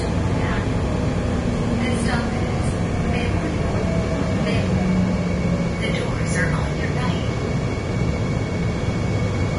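From start to finish the audio shows heavy damage that is likely Vorbis compression, at a bitrate that sounds as low as about 30 kbps. Nothing remains above 10.6 kHz, so a spectrogram shows a flat ceiling there, with blotchy, speckled texture just below it where the treble was quantised so coarsely that fine detail turned to noise. The ear hears this as hiss and grain, with roughened tones and softened, smeared attacks.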